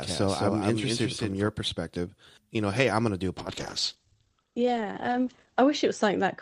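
Speech clip with two faults. From the start until 1.48 s, a second, undecayed full-band copy of the speech runs about a fifth of a second behind at around 5 dB lower and stops abruptly, which sets it apart from room echo and is likely a doubled audio track. From 3.38 s, right after "going to do a", a call bitrate drop makes the sound rough and watery and cuts the top end from 20 kHz to 8 kHz until the end. That coarse texture, beyond simple muffling, fits the encoder falling from 64 to 12 kbps.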